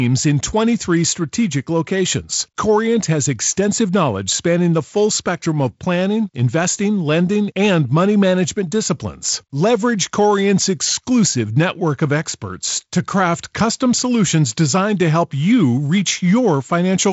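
Nothing goes wrong anywhere in this speech; it just sounds like G.722 wideband telephone coding at 48 kbit/s doing its job, with the top end tapering off around 7.7 kHz and the codec leaving only a light touch on the sound.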